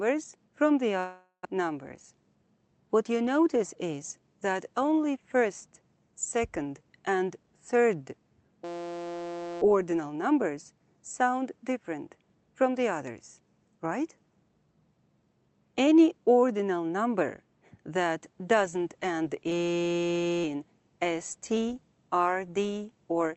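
Audio carried over a call link whose top end stops near 8 kHz, consistent with Opus at a modest bitrate. The clip has three kinds of fault. From 0.99 to 1.47 s there is a long network dropout, likely caused by packets failing to arrive. The last sound is stretched into a fading buzz, then about 70 ms of silence follows, and roughly 400 ms of material never returns. On a spectrogram this appears as a smeared, decaying band that ends in a blank gap.

From 2.03 to 2.25 s a jitter buffer speed-up runs the audio at about 113% speed with its pitch unchanged. A few tens of milliseconds are trimmed away as whole pitch cycles, so the sound feels briefly hurried. The waveform shows slightly shortened stretches, while the spectrogram's harmonic spacing stays unchanged.

A system hang loop occurs twice, from 8.64 to 9.62 s and from 19.52 to 20.44 s. Each time a 5.8 ms fragment repeats exactly, which fits a 256-sample buffer, and produces a steady 172 Hz buzz. 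The waveform shows identical cycles repeating, and the spectrogram shows a rigid comb of harmonics spaced at 172 Hz.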